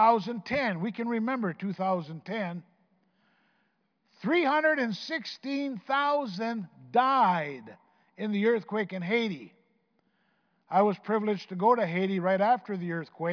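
No technical faults can be heard anywhere in this speech clip.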